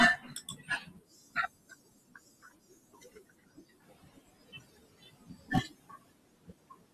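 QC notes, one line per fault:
Throughout, noise suppressor artifacts: residual background sinks between words and rises under them as bands are gated frame by frame; spectrogram shows patchy, blinking noise floor between and under speech.
Throughout, filter restarted on every block: a 250 Hz buzz of ticks tracking signal level, which fits a 128-sample block; waveform shows small transients at each block boundary.
0.17–5.51 s and 5.67–6.94 s, speech cut by the noise suppressor: soft consonants and quiet stretches drop by up to about 21–22 dB, sounding swallowed; spectrogram shows speech energy carved away with the noise.
3.81–4.15 s, noise suppressor catching up: room noise jumps about 18 dB near 4.0 s and passes with little reduction, then sinks by about 17 dB over 340 ms; spectrogram shows a bright noise band fading.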